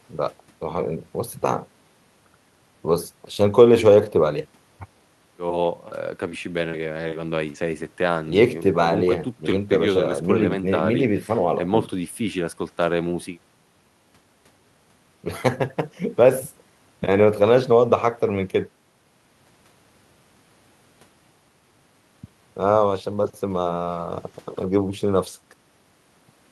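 No technical faults can be heard anywhere in the speech recording, and the signal stays steady and intact throughout.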